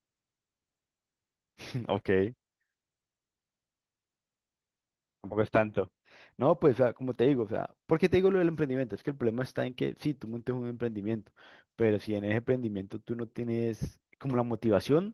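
Opus voice compression runs through the speech clip at a low hybrid-mode bitrate, consistent with about 16 kbps. The coarse excitation coding leaves it plainly hoarse and slightly robotic.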